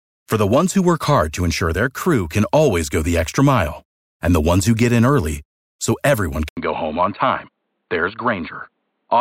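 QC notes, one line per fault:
6.49–9.21 s, input switched to a poorer device: an 80 ms gap, then duller, slightly quieter speech cut above 4.5 kHz over faint new noise, likely from a lesser microphone.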